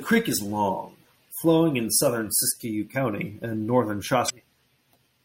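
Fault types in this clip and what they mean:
MP3 compression: throughout the speech, plainly audible codec damage, likely from a low-bitrate MP3 encode around 64 kbps, with watery, smeared consonants.
Damaged data in a compressed stream: at 4.26–4.30 s, just after "and northern", corrupted frames make the decoder lose sync, producing a brief glitch.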